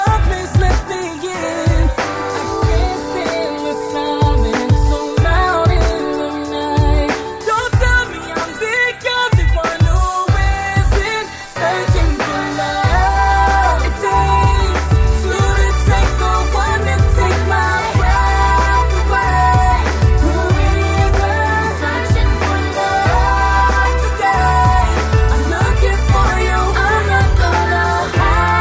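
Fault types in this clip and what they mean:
No fault types are present in this clip, so there is nothing to explain.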